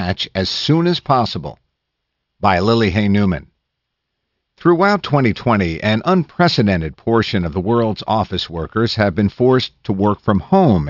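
Aliasing runs through the whole speech clip. It points to a drop from 48 kHz to 12 kHz with no filter first. Energy above 6 kHz folds back below it, roughly 20 dB down. Sibilants sound gritty and metallic.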